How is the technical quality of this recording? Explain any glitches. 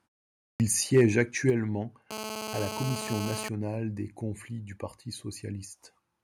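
The recording has four distinct faults in its first three and a half seconds, affecting level, distortion or added noise.

At 0.50 s there is a clipped start after a pause. After half a second of silence the output device has to wake up again, and about 99 ms of the speech is swallowed. The sound begins abruptly without its onset. Unlike a muted pause, which fades out between sounds and returns in time, this cuts into the speech itself.

From 0.96 to 1.20 s the loudest syllables turn harsh and crackly, with their peaks flattened. The likely cause is microphone overload. The input was driven about 3 dB past the converter's limit, so a small share of samples were cut off flat. This is a distortion built into the waveform, not a separate noise added on top of it.

At 1.50 s the voice and the background both drop by about 6 dB in a single step. That points to the microphone volume being stepped down, most likely by call software reacting to the overload just before it. 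Because the whole signal falls at once, it is not a pause fade or a dropout.

From 2.11 to 3.49 s, just before "des conflits du", there is a GSM phone buzz. A nearby 2G phone is sending data in bursts at 217 Hz, and the audio circuit picks up the radio pulses. The result is a raspy, harmonic-rich buzz at about 6 dB below the speech. It comes and goes with the data traffic and does not follow the speech, which separates it from steady mains hum.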